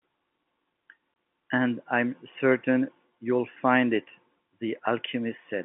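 A speech clip carried over a G.711 telephone channel, band-limited to roughly 150 Hz to 3.5 kHz. At 1.14 s to 1.16 s there is packet loss filled with silence. A 20 ms hole cuts the sound abruptly. Its length fits one lost packet.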